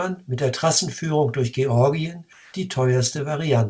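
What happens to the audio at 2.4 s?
From 2.33 to 2.54 s, about 210 ms, the real background drops out and comfort noise in place of the background fills the gap: a flat, featureless hiss about 2 dB quieter, likely because discontinuous transmission stopped sending during the pause and the receiver synthesised noise instead.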